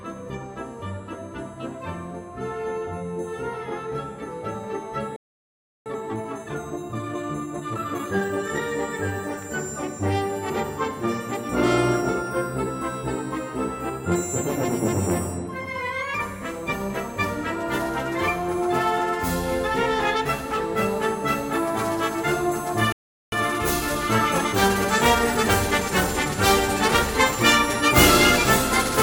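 At 5.16 s the sound drops out for about 0.7 s, a playback stall, likely the player starving for data, then resumes at 5.86 s. A time-compressed catch-up follows until 8.64 s: roughly 1.25x speed at normal pitch. From 14.12 s to the end, pre-emphasis is left on. The CD 50/15 µs treble boost was never undone, so 10 kHz sits about 8 dB hot relative to 1 kHz, making it bright, thin and hissy. Another gap of about 0.4 s runs from 22.92 to 23.32 s, then a milder 1.1x rush lasts until 26.32 s.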